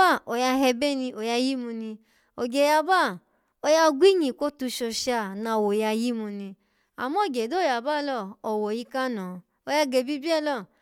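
No technical faults can be heard anywhere in this speech recording. There is nothing in the audio that marks a moment where the signal path went wrong.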